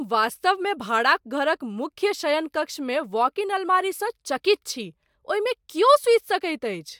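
No technical faults can be heard anywhere in the speech.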